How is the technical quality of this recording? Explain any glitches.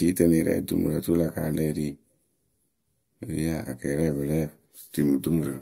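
The technical quality of this recording is sound, with no glitches to explain.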